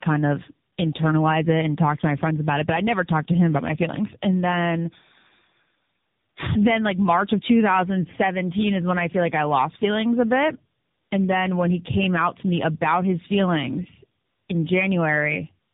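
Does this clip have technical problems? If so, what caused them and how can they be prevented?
Yes. Tandem speech coding is heard throughout. The speech is rough, muffled and warbly, with nothing above 3.7 kHz. This fits three speech coders in a row, each re-coding the previous one's damage. Passing the call through end to end in one codec prevents it.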